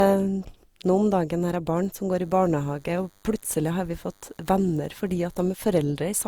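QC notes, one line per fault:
Throughout, generation loss: speech sounds swirly, hollow and smeared with blurred attacks, likely from repeated lossy re-encoding, around four passes, each adding fresh quantisation noise.
2.13–5.76 s, DECT cordless phone buzz: thin, steady 100 Hz buzz rich in harmonics at about -40 dB, from rectified radio bursts every 10 ms.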